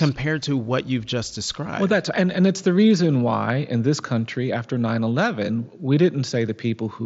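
No faults; the speech runs over a wideband Bluetooth headset link using the mSBC codec, with audio band-limited to 8 kHz and the light grain on louder passages that this codec normally leaves.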